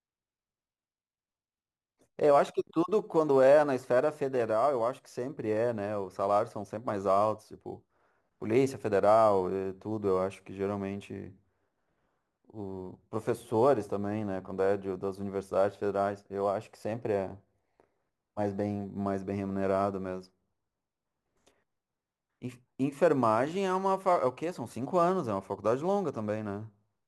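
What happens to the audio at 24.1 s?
At 24.1 s the speech is going through a crude rate conversion, as it is for the whole clip. The sound points to an upward change of rate, something like 44.1 kHz to 48 kHz, done by simply repeating the nearest sample instead of filtering. That regular repetition leaves an error roughly 30 dB below the speech, heard as a gritty, inharmonic fizz riding on the louder and brighter sounds.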